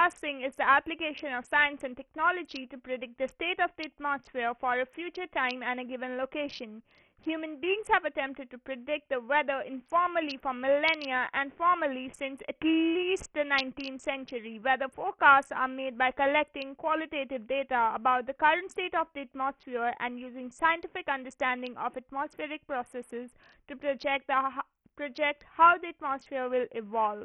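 All the way through the speech there's a heavy coding smear that sounds like Bluetooth SBC compression, likely from a link squeezed down to a very low rate, which fits something around 48 kbps. At that rate the codec starves its upper sub-bands, so the treble keeps dropping out and flickering back in, while the remaining bands are quantised so coarsely that a gritty, grainy noise and some aliasing ride along on every syllable.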